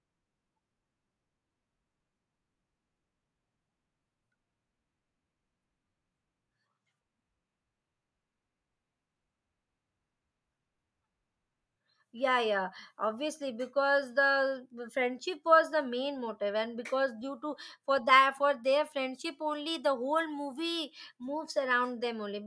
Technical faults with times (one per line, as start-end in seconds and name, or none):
none